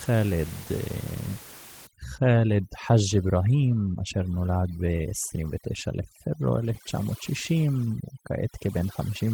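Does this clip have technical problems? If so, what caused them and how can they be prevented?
Yes. From 1.87 s to the end, overdone noise removal is audible: a noise reducer set too aggressively cuts individual frequency bands whenever they sit near its noise estimate, so the room noise, about 18 dB below the speech, collapses into near silence with twinkling specks. Quieter speech components are removed along with it. To prevent this, lower the reduction depth or threshold so the residual noise floor stays audible.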